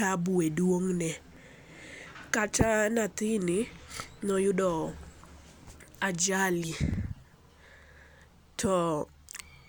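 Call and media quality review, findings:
Likely dropped buffer (overrun) at 1.37 s and 6.94 s: capture not read before hardware overwrote it, a few milliseconds discarded, surrounding speech spliced directly. Heard as a small skip forward in the speech, no gap of silence.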